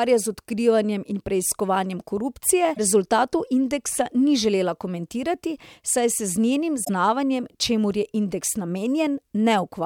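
Damaged data in a compressed stream at 2.71–2.79 s and 6.81–6.90 s: corrupted frames make the decoder lose sync, producing brief glitches of roughly 80–100 ms.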